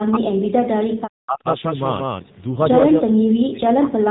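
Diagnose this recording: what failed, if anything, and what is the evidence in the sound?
A doubled audio track runs throughout. A full-band copy trails the original by roughly a fifth of a second at about equal level, with no decay or room colour. This is likely a second capture path or an edit holding two copies out of step.

The codec stage shows the AMR narrowband mobile codec. Nothing passes above 3.8 kHz, and the speech is plainly buzzy and synthetic, which fits a low AMR-NB bitrate around 7.4 kbps. The pulse-driven vocal-tract model cannot carry the fine detail of the signal.

Speech suppressed in double talk affects 0 to 1.46 s and 3.01 s to the end. In both spans the speech dips or breaks into pieces, falling by roughly 40 dB at its deepest. The likely cause is the call's echo canceller attenuating the near talker while both sides spoke.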